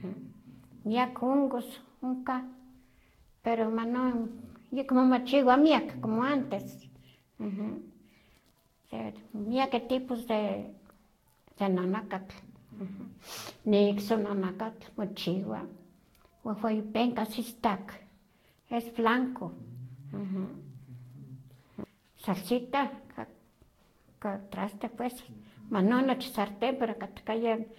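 Generation loss runs throughout the speech, with nothing above 16.6 kHz. It sounds swirly, smeared and hollow, with blurred attacks. The likely cause is about four successive lossy encodes, consistent with Vorbis near 64 kbit/s, each requantising on a shifted frame grid.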